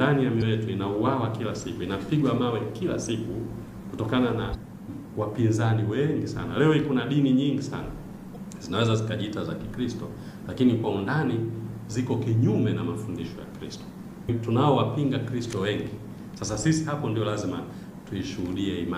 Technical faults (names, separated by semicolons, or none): damaged data in a compressed stream